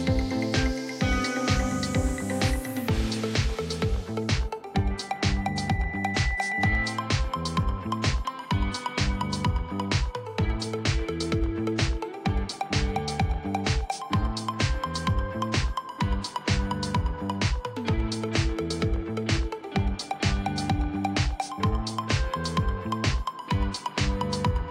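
At 4.90 s a loudspeaker feedback squeal begins and runs until 7.16 s. A single tone at 2 kHz swells over roughly two seconds until it sits around 5 dB above the rest of the sound, then stops. The microphone was picking up the loudspeaker it feeds, and at 2 kHz the loop gain exceeded one, so that frequency kept reinforcing itself.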